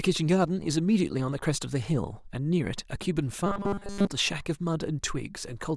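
A speech clip with robotic sound from repeated short buffers between 3.47 and 4.09 s. The voice collapses into a stiff, metallic buzz at 200 Hz, which fits a roughly 5 ms chunk being looped over most of that stretch, likely because new audio arrived too late and the last block was replayed in its place. A spectrogram shows flat, evenly spaced harmonic lines at multiples of 200 Hz, and the waveform shows identical cycles repeating every 5 ms.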